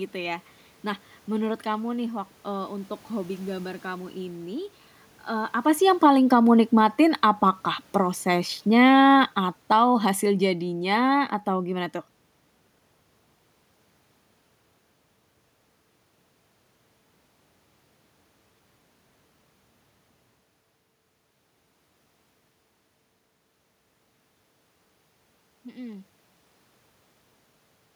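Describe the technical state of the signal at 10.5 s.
At 10.5 s the speech and its background are sinking together, about 7 dB down over 7.96 to 11.91 s. This is automatic gain falling: the gain control judged the input too loud, or its background noise too strong, and is steadily pulling its level back.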